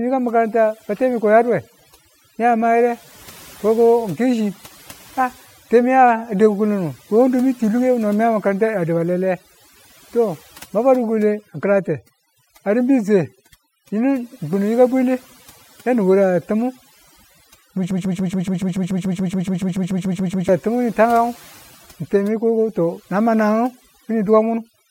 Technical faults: overdone noise removal; broken-record loop

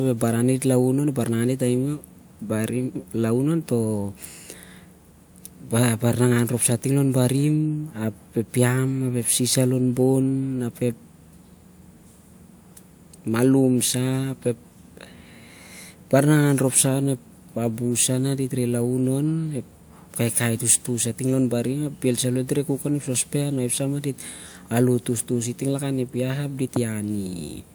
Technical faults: none

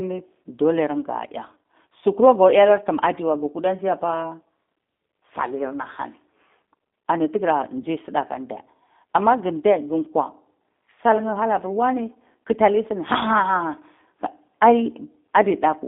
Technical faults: G.729 codec; VoIP packet loss concealed by the speech codec

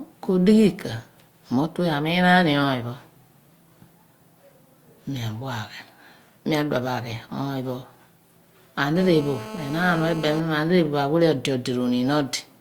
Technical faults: GSM phone buzz

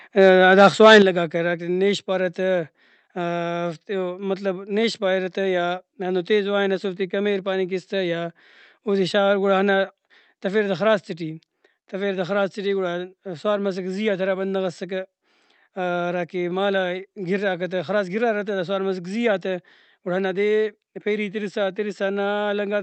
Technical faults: microphone overload; microphone volume stepped down

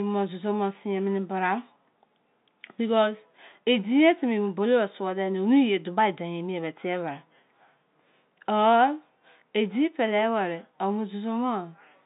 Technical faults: none

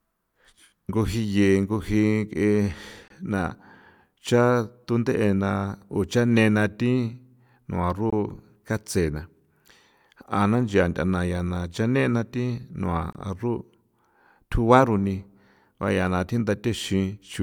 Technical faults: gap between chunks

